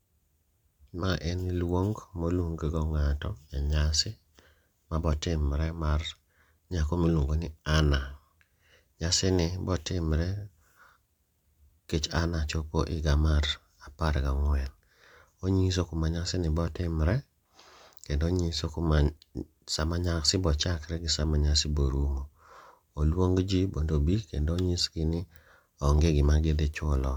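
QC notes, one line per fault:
No faults heard.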